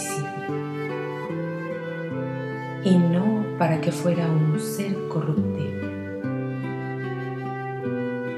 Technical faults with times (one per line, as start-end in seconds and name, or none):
none